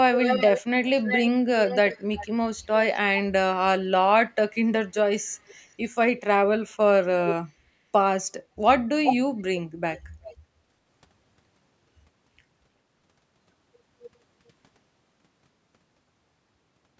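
Echo leak at 0.17–1.3 s, 1.66–2.27 s, 5.34–5.75 s, 9.04–9.42 s and 9.93–10.34 s: a delayed second copy of the speech trails the original by 360 to 384 ms, with the gap lengthening slightly across the clip. The likely cause is a loudspeaker at the far end whose echo canceller let part of its microphone pickup back into the call. The copy is roughly as loud as the speech at 9.04 s, a little quieter in the first two bursts, faint at 9.93 s and barely audible at 5.34 s.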